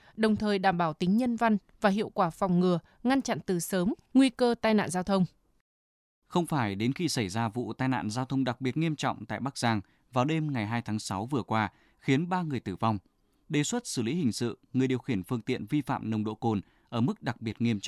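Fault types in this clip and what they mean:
No technical faults are audible in this speech.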